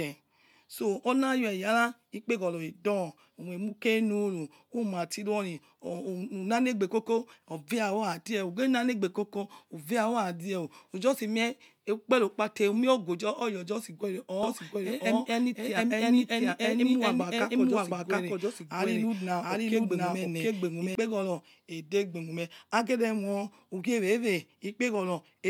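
A doubled audio track runs from 14.43 to 20.95 s: the speech is heard twice, a second full-band copy trailing roughly 0.7 s behind at about the same level, dry and without room colour, cutting in and out abruptly, likely from a slower second capture path.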